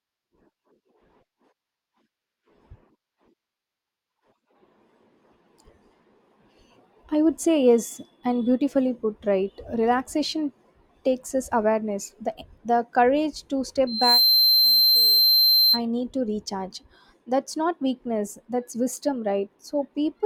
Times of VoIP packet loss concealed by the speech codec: none

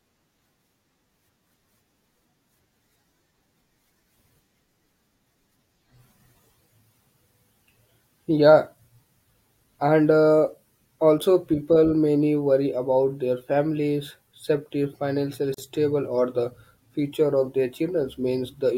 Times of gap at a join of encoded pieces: 15.54-15.58

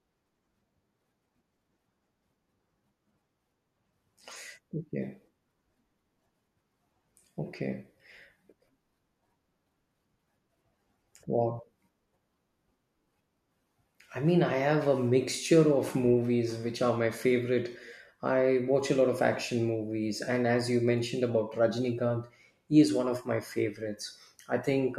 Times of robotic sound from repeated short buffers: none

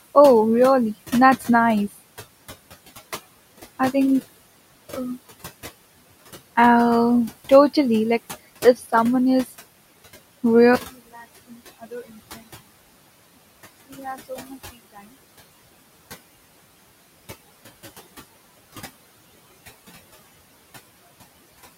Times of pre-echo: none

